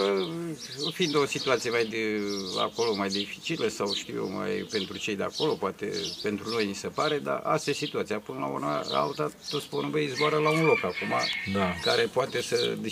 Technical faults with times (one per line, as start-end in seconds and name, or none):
none